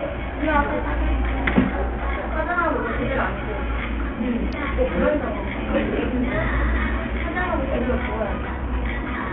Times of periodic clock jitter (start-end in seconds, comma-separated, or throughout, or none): none